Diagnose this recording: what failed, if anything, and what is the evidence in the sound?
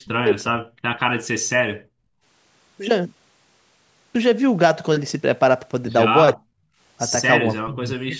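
The speech dips sharply at 0.0–0.27 s, 0.44–0.58 s, 6.35–6.52 s and 7.43–8.19 s. Most drops are very deep, the second milder. The likely cause is speech suppressed in double talk. The call's echo canceller could not separate the near-end talker from the loudspeaker echo of the far-end audio and attenuated both.

The room sound is also hit by background gating from the echo canceller, in the call processing. Between 1.75 and 2.23 s it falls by about 35 dB and then returns. The canceller clamped the microphone while loudspeaker audio played, then released it.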